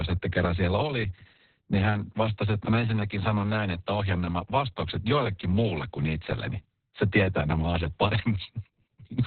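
Speech runs through heavy Opus voice compression from start to finish. Nothing survives above about 4.3 kHz, so the band is cut to narrowband and the speech sounds muffled and boxy. The coarsely coded excitation of the SILK linear-prediction coder makes it hoarse and slightly robotic throughout. The narrow bandwidth and the depth of the damage point to a very low bitrate, around 6 kbps, and fit long 60 ms frames.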